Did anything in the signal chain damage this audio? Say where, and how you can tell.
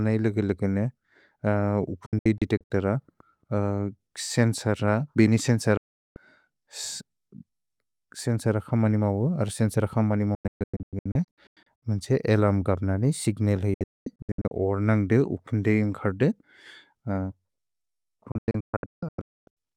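Yes, at the reception and decode stage: a digital broadcast dropout. The speech snaps to silence in short holes around 2.06–2.71, 5.77–6.17, 10.35–11.83, 13.74–14.52 and 18.32–19.57 s. The gaps come in 32 ms steps, which points to whole frames being muted.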